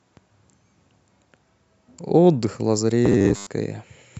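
Robotic sound from repeated short buffers runs from 3.06 to 3.48 s, where the speech collapses into a rigid, metallic buzz pitched at 100 Hz that only loosely tracks the words. This is likely the result of new audio arriving too seldom, so the playback side keeps looping the last chunk it received, and a 100 Hz buzz fits a 10 ms slice. Most of the stretch, roughly seven tenths, is repeated material rather than fresh speech.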